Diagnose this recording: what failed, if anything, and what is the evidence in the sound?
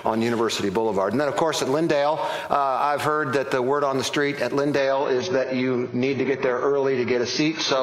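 The network-driven adaptive stream dropped to a lower bitrate at 4.78 s and stays there to the end. The switch is abrupt and gapless: from that point the treble vanishes above 6.5 kHz, and the remaining band sounds thinner and more smeared. The sound is consistent with a drop from about 96 kbit/s to about 16 kbit/s AAC. On a spectrogram, the upper band ends in a hard horizontal ceiling at the switch point, while the waveform shows no break.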